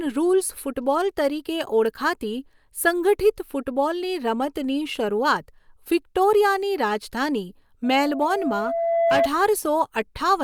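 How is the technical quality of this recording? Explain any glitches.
The recording has one clear fault, a feedback squeal near the end. Loudspeaker feedback squeal, from 7.84 to 9.29 s: the microphone picks up its own loudspeaker, and at 673 Hz the loop gain passes one. That tone swells over roughly a second and a half into a steady howl sitting a few decibels above the speech.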